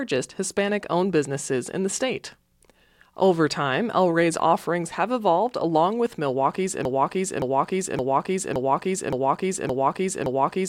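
At 6.85 s the speech locks into a broken-record loop: a 0.57 s fragment repeats exactly, back to back, seven times until the clip ends. The playback or stream likely stalled and kept resending its last buffered piece, so the intervening audio is lost.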